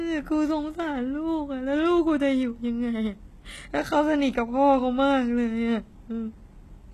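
From start to finish the s sounds come out gritty and metallic, the top end bright but synthetic, with nothing above about 12.3 kHz. This is likely HE-AAC compression at a bitrate near 16 kbps, its treble rebuilt from copied lower bands.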